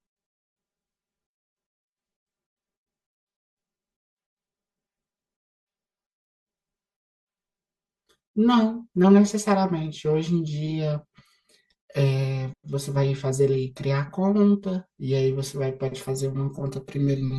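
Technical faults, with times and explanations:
Throughout, channel delay (comb filtering): one side is running roughly 5 ms behind the other, and once the two are folded down to mono, whatever they share cancels at regularly spaced points. The first dip lands somewhere around 100 Hz, with more following every couple of hundred hertz up the spectrum. Those fixed notches carve holes through the speech, which is why it comes across hollow and a bit phasey, like talking down a tube.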